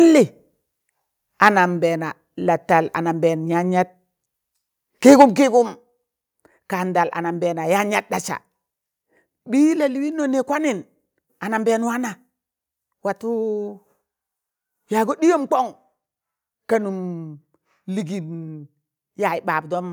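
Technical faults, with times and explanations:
1.43–1.49 s and 5.07–5.25 s, microphone overload: the loudest moments turn harsh and crackly, briefly at 1.43 s and longer and rougher from 5.07 s. The likely cause is input driven about 3 dB and then about 6 dB past the converter's ceiling, flattening the tops of a few percent of the waveform.
5.22 s, microphone volume stepped down: the voice and the background drop together in one abrupt step of about 3 dB, near the end of the second distorted burst. This is likely the call software reacting to that overload by lowering the microphone's input gain in a single move.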